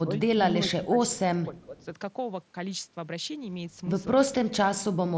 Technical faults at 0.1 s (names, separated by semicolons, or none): speech suppressed in double talk